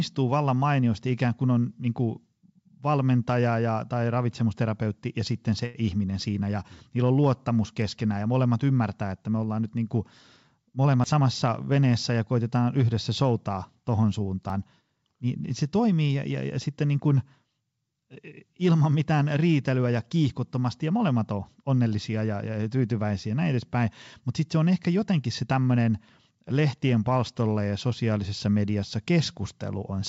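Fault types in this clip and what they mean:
Short stall from a late packet: from 5.66 to 5.77 s a packet arrived late and the jitter buffer ran dry, so the receiver stretched the last sound for 83 ms, held and slightly buzzy, then resumed where it left off, losing nothing but adding 83 ms of delay.
Jitter buffer speed-up: from 10.57 to 11.21 s the receiver, holding more audio than its target, cut short pitch-period pieces over and over, trimming around 70 ms in total, so the speech runs at 110% speed with unchanged pitch and sounds hurried.
Dropped buffer (overrun): at 11.04 s and again at 14.5 s there is a sudden jump forward, roughly 70 ms of sound gone each time and the edges butted together, likely because samples were overwritten before the program collected them.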